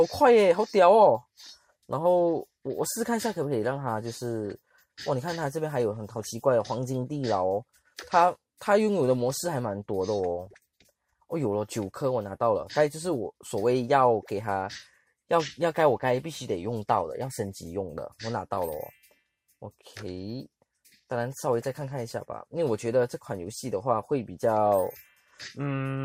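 The audio has DAB burbling from 10.44 to 10.9 s. Weak reception lets residual bit errors corrupt MP2 sub-bands, which shows on a spectrogram as flickering band-limited blocks.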